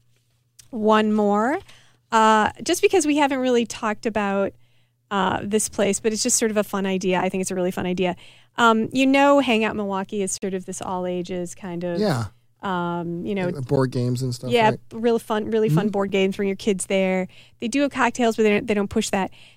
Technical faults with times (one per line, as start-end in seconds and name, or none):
10.38-10.42 block of digital silence
13.76 block of digital silence
16.09 block of digital silence